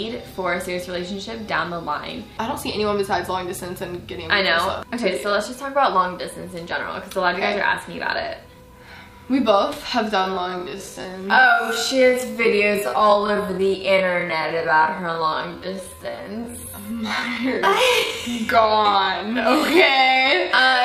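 From 10.14 s to the end, the audio is a time-stretched section: the pace abruptly drops to about 0.54 of normal speed while the pitch stays where it was. That section plays nearly twice as long as the original material would, and it drags. This is likely the result of software lengthening the audio to fill a target duration, preserving pitch by repeating short overlapping fragments rather than resampling.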